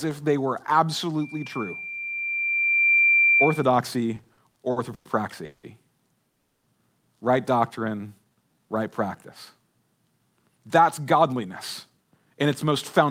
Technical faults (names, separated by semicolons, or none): loudspeaker feedback squeal; repeated stalls (stutter); call audio freeze; jitter buffer slow-down; jitter buffer speed-up